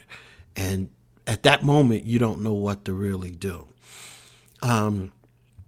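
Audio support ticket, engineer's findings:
Clock drift between sender and receiver: sender clock running roughly 4% slow, jitter buffer draining steadily. Receiver stretches playback, small timing hiccups recurring throughout.

Repeated timing corrections, 0.06 to 5.47 s: receiver repeating short pieces to keep buffer fed. Playback near 97% speed, roughly 150 ms added, slight recurring hiccups.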